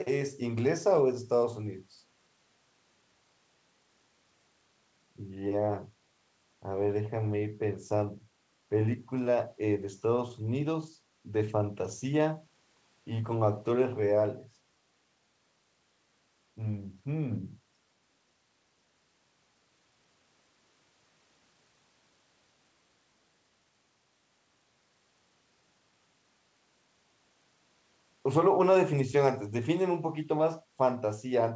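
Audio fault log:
No faults: the speech shows only the expected traits of call microphone processing and a G.722 call path at 64 kbps, with the lowest bass trimmed and nothing above 8 kHz.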